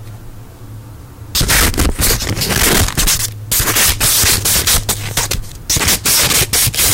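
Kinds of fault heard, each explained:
Hard clipping: present throughout the sound, where the signal is driven about 35 dB past what a stage in the chain can carry, so every peak is sliced off flat at the ceiling. Roughly a fifth of the waveform sits pinned against that limit, and those squared-off tops generate a spray of high harmonics. The overload is so large that every loud moment turns into a harsh, buzzing fuzz rather than occasional crackle.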